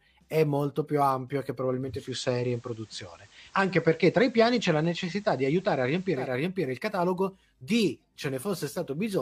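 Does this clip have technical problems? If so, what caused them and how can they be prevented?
Yes. From 1.85 s, after "più ampio e che", to 6.36 s, before "riempire il catalogo di", digital radio blending to analogue swaps in FM over 242 ms. Hiss rises well below the speech, and level shifts about 1 dB. Stronger digital reception or a better antenna prevents this.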